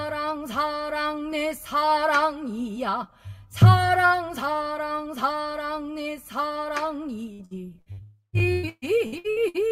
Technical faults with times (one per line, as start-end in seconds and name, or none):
7.33-8.00 repeated packet loss (robotic sound)
8.03-8.36 long network dropout
8.39-9.57 repeated packet loss (robotic sound)